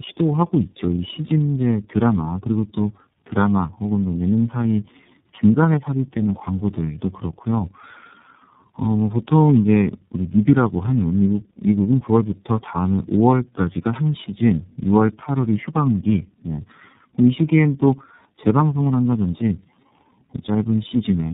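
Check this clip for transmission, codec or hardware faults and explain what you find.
One fault runs through the whole clip: tandem speech coding. Throughout, the speech passed through several low-rate coders in a row, each re-encoding the previous one's degraded output, which fits G.723.1 and iLBC links. The result is rough, noisy, muffled, warbly speech with nothing above 3.7 kHz.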